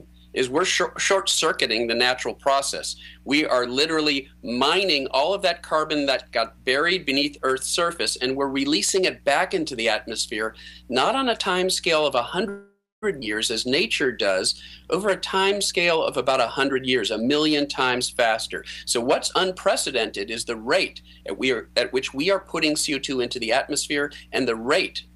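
At 12.49 s the audio stalls until 13.04 s. That is a call audio freeze. For about 0.53 s the last sound carries on as a fading buzz, then drops to silence for roughly the final 0.26 s. The likely cause is packets held up in transit, so the jitter buffer ran dry. When the audio resumes, it picks up exactly where it stopped. Nothing is lost. A gap has simply been inserted.

Right after, from 13.20 to 13.24 s, comes a skip ahead. Playback jumps forward, with only a tiny 13 ms join between the two sides. Around 0.4 s of audio is gone. A stretch was dropped, either on the way or by the jitter buffer when it overflowed, while later audio was already waiting. The sound before and after the jump is butted together almost directly, so the cut is abrupt.

From 13.68 to 15.60 s there is a jitter buffer slow-down. The audio plays at about 92% speed while keeping its pitch. The receiver repeated single pitch periods and bits of pauses many times over, adding 158 ms in total. 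It was rebuilding a reserve, with the buffer running low or having just raised its target delay. Sounds are drawn out and lazy across this stretch.

Then, from 15.74 to 19.69 s, comes a jitter buffer speed-up. The audio runs at about 107% speed, still at the same pitch. Short pieces of one or a few pitch periods were cut out repeatedly, removing around 0.3 s. The buffer now held more than its target and was trimming the excess delay. The passage sounds hurried.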